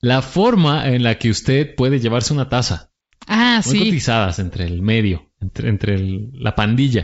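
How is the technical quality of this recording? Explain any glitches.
One short glitch stands out in the speech, carried over G.722 wideband telephone coding with faint upper-band hiss at most, which fits the 64 kbit/s mode.

Bit errors on an ADPCM link, at 6.25 s: a few flipped bits, at a rate well under one percent, knock the decoder's step size and predictor off track. The disturbance spreads over what fits a few frames, heard as a brief pop with a rough, level-shifting burst.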